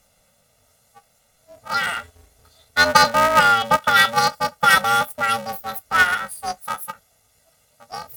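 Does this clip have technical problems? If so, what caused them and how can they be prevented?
Yes. Throughout the speech, planar audio is read as interleaved. Each 2.9 ms block, which fits a 128-sample buffer, holds all left samples then all right, but is read as alternating pairs. This produces a robotic buzz at about 345 Hz with no octave shift. To prevent it, check the channel layout flag and convert planar to interleaved before playback or encoding.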